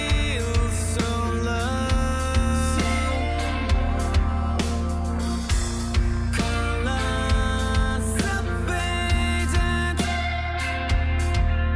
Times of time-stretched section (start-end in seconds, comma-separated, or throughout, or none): none